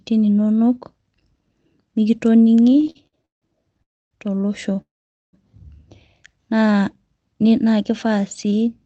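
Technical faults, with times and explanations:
2.61–3.83 s, repeated stalls (stutter): the speech keeps catching and restarting, with 15 short hold-ups across a little over a second, the longest about 164 ms. Packets were arriving late or too slowly, so the jitter buffer kept running dry and the receiver stretched out the last sound each time. Roughly a third of this span is filled-in sound, but nothing is lost; the talk just drags. What sets it apart from a freeze is the many brief hitches rather than one long stop.
3.83–4.13 s and 4.81–5.35 s, call audio freeze: the sound halts twice, for about 0.28 s and then about 0.52 s. In each, the held-over sound dies away and most of the gap is silence. The likely cause is packets being held up in transit, emptying the jitter buffer until they arrived and playback resumed where it left off. Unlike the stutter, each is a single long pause, and no speech is skipped.
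6.55–6.73 s, jitter buffer slow-down: for under a fifth of a second the speech plays at about 83% speed with its pitch unchanged, drawing the sound out. The jitter buffer was short of reserve, so the receiver repeated single pitch periods several times over, adding about 38 ms. Unlike a stall, there is no break or fading; the speech simply slows and lengthens, with at most a faint warble.
8.45–8.69 s, jitter buffer speed-up: near the end the speech briefly runs at about 112% speed, still at its normal pitch, sounding slightly rushed. The jitter buffer was holding more audio than it needed, so the receiver trimmed out short runs of pitch periods, around 40 ms in all, to bring the delay down. This is the reverse of the slow-down: sounds are shortened rather than stretched, and nothing stops or repeats audibly.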